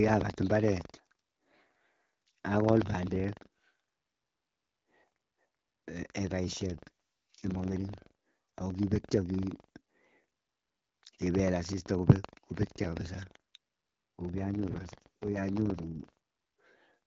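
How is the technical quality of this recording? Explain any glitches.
The recording has two problems: a steady buzz caused by buffer tearing throughout, and two stretches where the AMR wideband speech turns coarse because of an AMR rate drop. The underlying HD Voice coding sounds clean and only lightly coloured outside those stretches.

Buffer tearing runs through the whole clip as a robotic rattle at about 23.4 Hz, which fits a 2048-sample buffer. The writing program and the playback hardware have drifted so that they cross inside each buffer period. A small sliver of every buffer therefore plays audio from roughly 150 ms earlier, with a hard join at each end. The rattle follows the speech and stops in the pauses. Its fixed repetition rate is what separates it from random dropouts or codec grit.

The AMR rate drops run from 6.65 to 7.88 s and from 14.36 to 16.09 s. The voice becomes rough, raspy and more synthetic, which points to the codec being pushed down from around 12.65 to 6.6 kbit/s. 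On a weak link, the network moves bits away from the speech model and into error protection. The bandwidth stays the same and nothing drops out. That distinguishes these stretches from packet loss or a switch to narrowband, and the clarity returns once each stretch ends.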